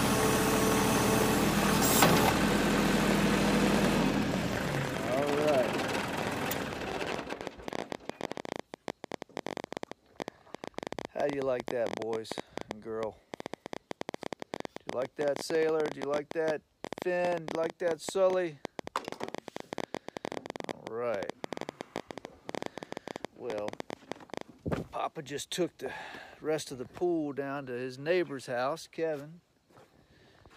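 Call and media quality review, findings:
Train of clicks, 0.06 to 24.4 s: irregular popping over the audio and gaps, about 12.5 clicks/s, roughly 300 total, peaks around 15 dB above signal. Likely cause: nearby equipment interference or a faulty connection or power supply injecting repeated pulses.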